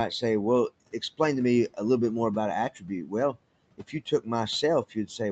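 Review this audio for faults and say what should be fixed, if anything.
Speech cut by the noise suppressor occurs at 3.78–4.27 s and 4.9–5.2 s. The suppressor misread low-level speech as noise and pulled it down by up to about 15 dB and 12 dB, leaving short stretches faint and swallowed. Lowering suppression aggressiveness or raising its speech-detection sensitivity would keep quiet speech from being gated out.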